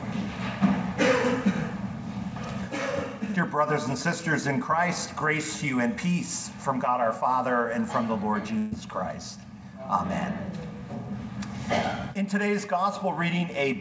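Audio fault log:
8.58–8.73 s, burst of packet loss: about 140 ms of audio never arrived, so the receiver extended the last sound across the gap, fading it, instead of leaving silence. Unlike a dropout there is no hole, and playback resumes further on with that stretch skipped.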